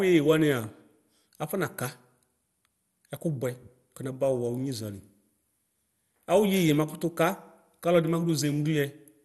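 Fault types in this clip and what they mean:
MP2 compression: The speech sounds dull and gurgly the whole way through, with a grainy roughness riding on it that's plainly audible, and there's nothing at all above 12.2 kHz. That's likely MPEG Layer II coding: it splits the sound into 32 sub-bands and rations bits among them, so when bits run short the top bands get switched off and what's left is quantised coarsely. The damage fits a rate of around 64 kbps.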